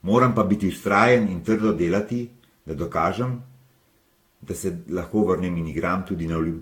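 Speech with generation loss the whole way through: swirly, hollow and smeared, blurred onsets, nothing above 18.9 kHz. Likely Vorbis re-encoded half a dozen times or more, around 68 kbit/s.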